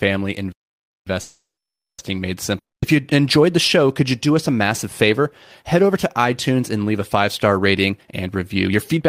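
At 0.52 s the player most likely ran short of data, or its playback thread was blocked, and this playback stall cuts the speech off in mid-flow. The output goes silent for about 0.54 s, until 1.07 s, when the player recovers and the sound resumes. The break is a clean stop with nothing in it, so the speech simply drops out and then carries on after a noticeable pause.

From 1.21 s to 2.01 s a call audio freeze follows. Packets were likely held up in transit, so the jitter buffer emptied and the receiver had nothing new to play. It stretches the last sound into a buzz or hiss that fades out, and about 0.58 s of silence follows. When the packets arrive the speech picks up exactly where it stopped. None of it is lost, but the delay grows by 770 ms.

At 2.58 s a long network dropout begins. Audio likely stopped arriving, and part of it was never played. Once again the receiver extends the last sound as a fading buzz or hiss, and silence follows, running to 2.94 s. 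When the speech returns it comes back further on, with about 240 ms of the original missing. It therefore jumps ahead slightly instead of resuming where it broke off.

From 7.91 s to the end, the jitter buffer held more audio than its target, so the receiver trimmed it with a jitter buffer speed-up. It repeatedly cut out short pieces of one or a few pitch periods, roughly 0.3 s in total. The speech runs at 120% speed while the pitch stays the same, so the closing stretch sounds noticeably hurried.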